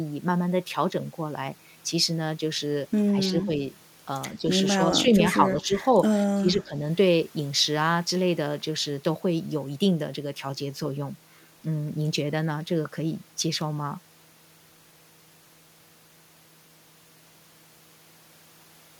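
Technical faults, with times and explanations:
3.09 to 6.75 s, speech suppressed in double talk: the speech dips and breaks up in pieces at 3.09–3.5, 4.39–4.46, 4.76–5.21, 5.37–5.76 and 6.34–6.75 s, by roughly 5 to 20 dB, worst in the last. Likely the echo canceller confused overlapping near-end talk with echo and attenuated both.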